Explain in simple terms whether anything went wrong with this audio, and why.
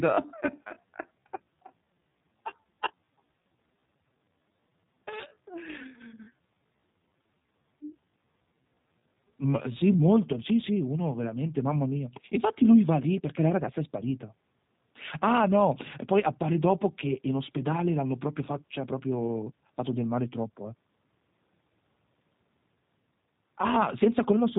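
From the start to 10.16 s there is a time-stretched section. The speech runs at about three-quarters speed with normal pitch, sounding dragged, likely from software repeating short slices, until "sì sì uno veramente".

Throughout, the G.729 codec, a low-rate phone-call format, rebuilds the speech from a simplified model. That leaves it rough and synthetic, with nothing above 4 kHz.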